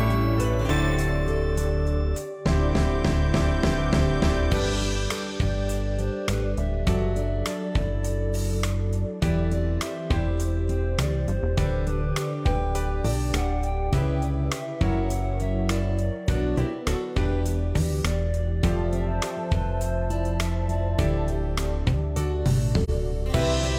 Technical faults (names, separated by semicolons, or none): AAC frame loss with muting